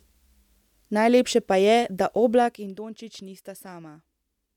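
A speech clip with zipper noise from 2.33 to 2.73 s: the level drops by roughly 15 dB in unsmoothed 1 dB steps, about 50 per second, and each step leaves a small click, so a fast ticking rides on the speech while the level falls.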